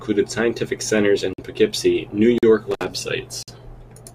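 At 1.33 s the speech stops dead for about 50 ms, until 1.38 s. It is a gap between stream segments. Two one-second segments leave a small timing hole, and the player fills it with silence. The edges are hard. Nothing is lost. The speech simply resumes late.

The same gap returns at 2.38 s, lasting about 45 ms to 2.43 s. It falls about one second after the first.

From 2.71 s to 2.85 s comes an intermittent contact. A loose cable or plug briefly opens. The line is open for about 57 ms within that span. Crackle marks the break and the reconnection, and faint hiss sits where the speech should be.

At 3.43 s the segment gap appears a third time. It runs about 50 ms, to 3.48 s. The one-second spacing makes the pattern plain: each segment boundary adds a short hole of silence.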